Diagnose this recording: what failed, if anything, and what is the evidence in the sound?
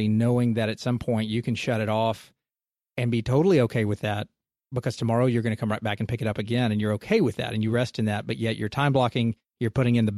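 Nothing in the recording points to a failure. No stage of the chain, from capture through to playback, leaves an audible trace of having gone wrong.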